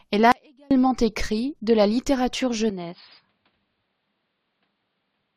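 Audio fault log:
0.32–0.71 s, audio dropout to a faint residue: the speech cuts out abruptly for about 390 ms, and the gap holds only a faint trace about 35 dB below normal level. This is likely a brief loss of the signal while the path after the break stayed live.
2.70–5.36 s, input switched to a poorer device: with no silence at the change, the speech turns dull and boxy, with nothing above 5 kHz, drops about 5 dB in level and gains a new noise floor about 50 dB down, likely from a narrower-band input taking over.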